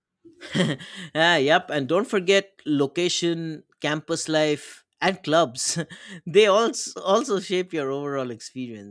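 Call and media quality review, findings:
No audible faults found in the speech clip; nothing to action.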